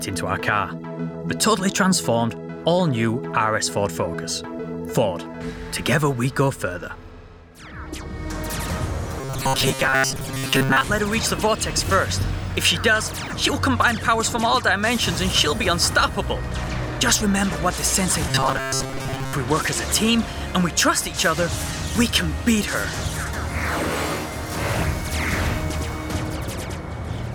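Fresh audio was likely reaching the playback software too slowly at two points, 9.21 to 10.86 s and 18.29 to 19.33 s, so it kept looping a short buffer of about 7.5 ms for most of each stretch instead of playing new material. The result is robotic sound from repeated short buffers: a rigid, metallic buzz locked at 133 Hz (one over the buffer length), which only loosely tracks the underlying audio.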